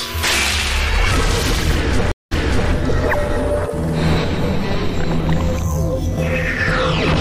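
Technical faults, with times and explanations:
2.12 to 2.71 s, stream reconnect: the connection dropped, so the player went silent, reconnected and started a new decoder partway through the stream. There is a gap of about 197 ms, and then the audio picks up 395 ms earlier than where it broke off, because the server resent a burst of recent data. That stretch is heard twice. The restarted decoder has no prior state, so the first returning frame fades in rather than starting at full level.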